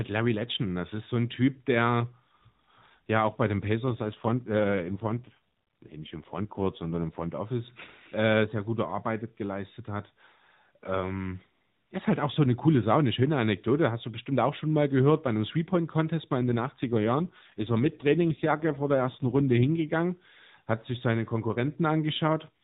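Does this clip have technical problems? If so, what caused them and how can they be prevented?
Yes. After "ja auch bei den", from 3.87 to 7.33 s, and again from 16.38 to 19.69 s, the speech turns rougher and more synthetic with no gap. This is an AMR rate drop, consistent with the mobile codec falling from 12.2 to around 5.9 kbps to protect a weak radio link. A stronger, more stable signal prevents it.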